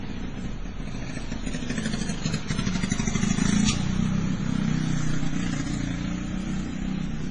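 Throughout the clip, the audio was likely transcoded between lossy codecs, with a low-bitrate MP3 encode, roughly 24 kbit/s, followed by a Vorbis encode at a similar rate. The second encoder spends its small bit budget reproducing the first one's damage while adding its own, so two kinds of smearing and swirling artefacts sit on top of each other. Nothing survives above 10.2 kHz, leaving the top end dull and cut off.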